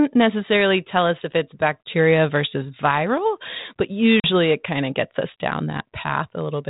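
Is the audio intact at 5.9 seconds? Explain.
Yes, the audio is intact at 5.9 seconds, with no fault at that moment.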